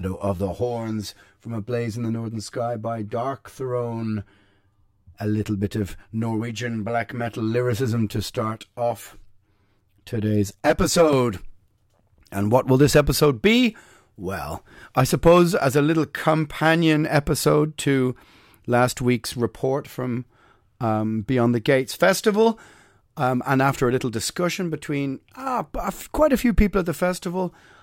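From 0.0 to 11.13 s the speech has channel delay (comb filtering): one channel lags by roughly 10 ms, so the mono sum cancels at evenly spaced frequencies from about 50 Hz, giving a hollow, phasey tone. A spectrogram shows fixed horizontal notch bands.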